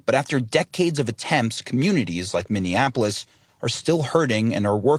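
A call bitrate drop runs from 2.39 s to 4.19 s, just after "decades of attempts communities". The encoder, forced onto far fewer bits, which fits a fall from 32 to 18 kbps, codes the speech coarsely, leaving it rough and watery for about 1.2 s at worst.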